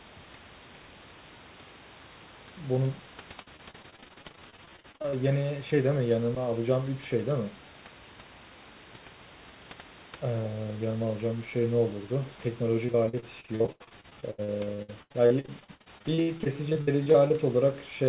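Speech over a call line, and it breaks up twice with repeated packet loss, that robotic sound you get when packets keep going missing. From 3.42 to 5.14 s and again from 12.86 to 17.32 s, short holes keep landing back to back, each patched by stretching the last bit of sound. About 30% of each stretch ends up filled in, with gaps up to 46 ms and 80 ms. The nothing-above-4 kHz band limit points to G.711, and room noise sits about 20 dB under the speech.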